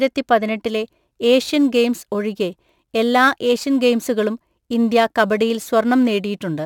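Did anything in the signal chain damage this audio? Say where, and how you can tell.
Yes. A crude rate conversion in the sample-rate conversion stage damaged the speech from 0.66 s to the end. The resampler appears to have picked the nearest existing sample instead of filtering, which fits a 44.1 kHz to 48 kHz conversion. The resulting timing errors repeat in a fixed cycle and create shifted, inharmonic copies of the speech, heard as a gritty, inharmonic fizz roughly 30 dB below the voice, strongest on loud and sibilant sounds.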